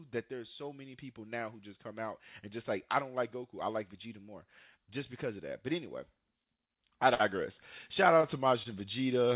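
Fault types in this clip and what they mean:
Short stall from a late packet: at 6.44, 7.14, 8.21 and 8.63 s a packet came in late and the jitter buffer ran dry, so the last sound was stretched for 22, 50, 19 and 21 ms, then playback resumed without losing anything.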